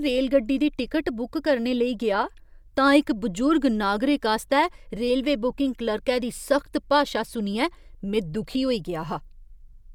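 No technical faults can be heard anywhere in the speech recording.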